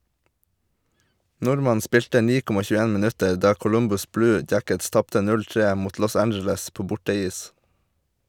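Nothing in this speech recording stands out as a technical problem at any point, so there's no fault to walk through here.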